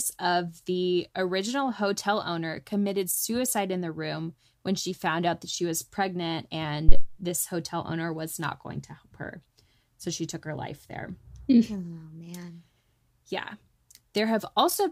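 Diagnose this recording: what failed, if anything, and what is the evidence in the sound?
A phantom power thump in the analogue wiring stage hits at 6.89 to 7.06 s, between "that she was pregnant" and "this hotel owner was". A supply switched on or off on the live input pushed a voltage step through the coupling capacitors. The result is a deep thump that drives the input to about 0 dBFS and dies away in around 40 ms. On the waveform it shows as a large one-sided excursion, and on the spectrogram as a bright low-frequency burst.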